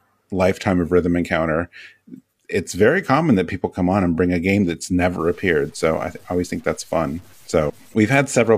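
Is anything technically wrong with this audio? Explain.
Yes, there are two faults.

Low bit depth without dither runs from 5.19 to 7.94 s, beginning just after "bring a game that's". The speech turns grainy and gritty, with a roughness that rises and falls with the voice and sits roughly 35 dB below it. The likely cause is truncating samples to a coarse grid, consistent with 8 bits, with no dither to decorrelate the rounding error, so the distortion tracks the signal instead of forming a steady hiss.

Damaged data in a compressed stream appears from 7.66 to 7.71 s, inside the gritty passage. The decoder hits corrupted bytes, misreads or drops the affected frames, and loses sync until it finds the next valid frame header. It is heard as a brief chirp or blip about 50 ms long.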